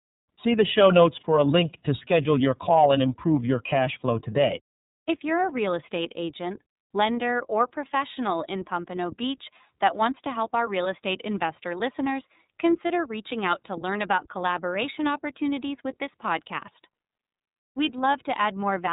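Throughout, the speech carries iLBC codec damage. Nothing above 4 kHz survives, and the sound is plainly rough and synthetic, which fits iLBC's 13.33 kbps mode with 30 ms frames.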